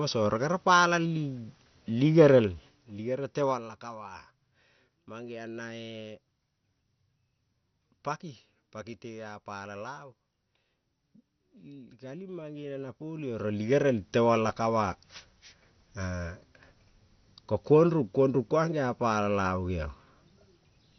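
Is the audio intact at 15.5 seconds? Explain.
No. At 15.5 seconds the speech carries the same damage heard through the whole clip, which points to MP2 compression as the likely cause. The encoder splits the sound into 32 sub-bands and shares out scarce bits. Here it sounds starved, which fits a rate near 48 kbps. Upper bands are switched off, so nothing remains above 6.2 kHz. The speech is dull and gurgling, with a heavy, granular roughness in the bands that survive.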